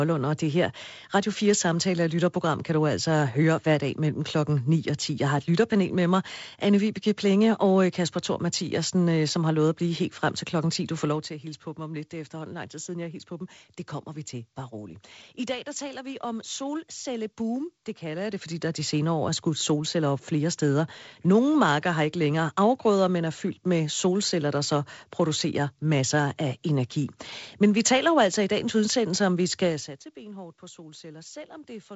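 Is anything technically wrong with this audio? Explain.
Yes, there is zipper noise twice in this speech. From 18.04 to 18.58 s, just before "der de senere år", the level rises about 10 dB in steps of about 1 dB, roughly twenty per second. From 29.64 to 29.98 s, after "dagens udsendelse om vi", it falls about 20 dB in similar 1 dB steps, around fifty per second. Each unsmoothed step clicks, so a ticking zipper rides on the voice as the level moves.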